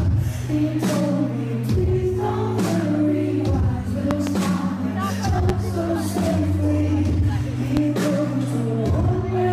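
Loud pops occur at 4.11 to 4.30 s (a double pop), 5.49 to 5.52 s and 7.77 to 7.80 s, each peaking roughly 15 dB above the sound, which continues underneath. These sharp transients are likely voltage pulses from a switch, connector, static or driver glitch.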